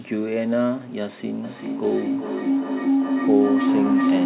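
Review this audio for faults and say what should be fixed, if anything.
A microphone-to-loudspeaker loop between two devices in one room gained level on each pass, causing feedback howl from 1.44 s onward: a tone near 300 Hz, pulsing about every 0.4 s, peaking about 4 dB above the speech. Keep only one device joined, or mute the other's microphone and speaker, so no loop can form.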